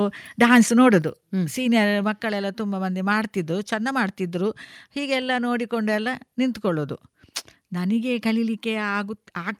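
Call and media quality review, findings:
Microphone volume stepped down at 1.02 s. Speech and background noise drop together by about 4 dB in one clean step, no fade. Likely the call app's auto input-gain control trimming the device mic level after judging it too hot.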